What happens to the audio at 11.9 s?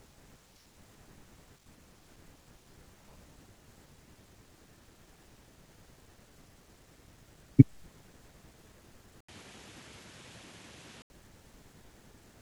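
At 11.9 s the audio is intact, with no audible fault at that moment.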